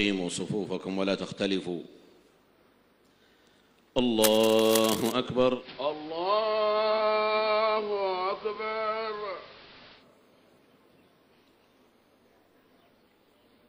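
From 4.24 to 5.12 s, dense, uneven crackling and rustling sits over the sound, only a few dB below it. This is cable scratch noise, likely from a worn connector or lead being moved. It shows as ragged broadband speckle on the spectrogram and spiky, irregular fuzz on the waveform.

From 5.55 to 10.06 s, the digital radio blends to analogue AM and back, with a 143 ms cross-fade at each end. The level drops by about 2 dB, and hiss rises to roughly 20 dB below the signal. The spectrogram shows a raised noise floor.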